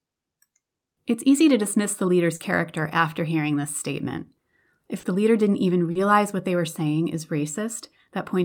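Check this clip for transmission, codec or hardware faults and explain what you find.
Three short concealed packet losses affect this speech. The first falls at 2.35 to 2.42 s, after "to dismiss the leader's" and before "after hearing this statement". The second is at 4.99 to 5.06 s, just before "the leader didn't even". The third is at 5.91 to 5.98 s, between "the leader didn't even" and "what they were saying". Each time, about 40 ms of audio arrived too late. The decoder bridged the gap by extending the preceding sound, heard as a brief smear or wobble.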